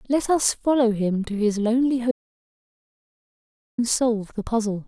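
At 2.11 s the speech cuts off abruptly in an audio dropout to silence, returning at 3.78 s after 1.67 s. The gap holds no room tone: a flat line on the waveform, a blank column on the spectrogram. The input likely dropped while recording continued.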